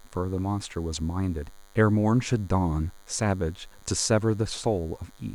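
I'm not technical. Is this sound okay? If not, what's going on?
No. DECT cordless phone buzz runs throughout: a nearby cordless phone pulses radio 100 times a second, and the audio circuit turns it into a faint, steady buzz under the speech.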